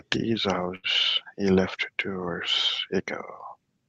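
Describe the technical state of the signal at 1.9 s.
At 1.9 s the speech signal is intact, with no dropout, glitch or distortion, only the ordinary character of the Opus call path it travels through.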